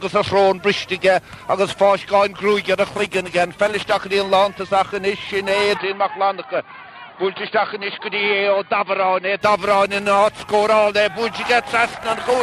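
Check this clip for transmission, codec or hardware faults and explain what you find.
One fault stands out: an input switched to a poorer device, from 5.77 s to 9.41 s. The likely cause is the recording path changing mid-take to a lesser microphone or a headset's call profile, whose narrower band cuts off everything above 4.7 kHz. The sound abruptly turns dull and boxy, a little quieter, with a faint new background noise well beneath it. There is no gap at either switch, and the brighter sound returns at 9.41 s.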